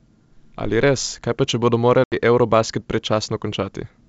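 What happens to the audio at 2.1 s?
Packet loss on the ADPCM call silences about 80 ms from 2.04 to 2.14 s, a blank vertical band with sheer edges. The mistracked predictor brings speech back slightly distorted.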